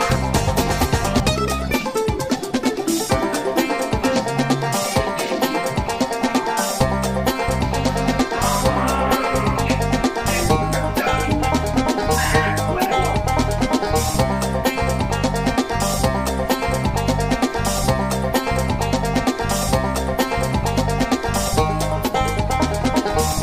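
Nothing stood out on listening, with no point in the audio drawing attention as a technical problem.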